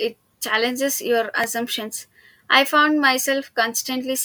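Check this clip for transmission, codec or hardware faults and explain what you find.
There's one fault: a repeated buffer at 1.44 s, right after "challenges your". A tiny slice of about 1.33 ms, which fits a 64-sample buffer, plays twice more because fresh audio arrived late. With pieces that short, it's a quick click or buzz rather than a stutter, and essentially nothing of the speech goes missing.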